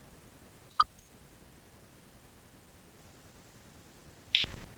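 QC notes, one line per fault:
throughout: clock drift between sender and receiver. The sending side's audio clock runs roughly 1.5 percent slower than the receiver's, so the receive buffer is fed a little less audio than it plays out and keeps draining. To avoid running dry, the receiver has to pad the stream by repeating short slices of audio, and that makes small timing irregularities recur across the clip rather than at one point.
0.02–4.08 s: repeated timing corrections. Over this stretch the receiver repeatedly inserts short repeated pieces to keep pace with the slower sender, stretching the speech to about 98 percent of its normal speed and adding roughly 70 ms overall. All the edits lengthen the audio, but they land at uneven intervals. Each one is brief, so the result is heard, if at all, as faint hiccups and a slightly dragging, unsteady tempo.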